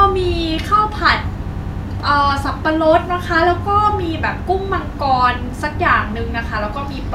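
A speech recording with repeated frames: between 1.53 and 1.83 s a 100 ms slice of audio is played three more times, a stutter that adds 300 ms to the clip. The repeated length fits a short run of compressed frames being written or sent again. A spectrogram shows the same 100 ms pattern tiled side by side; the waveform shows identical shapes repeating.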